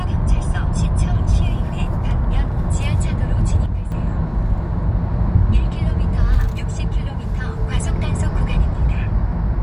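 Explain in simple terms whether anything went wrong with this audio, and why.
Something did go wrong: a sudden gain jump. At 3.66 s the whole recording, sounds and background alike, abruptly drops to noticeably quieter, then snaps back at 3.92 s. The likely cause is a level setting being switched instantly rather than eased in.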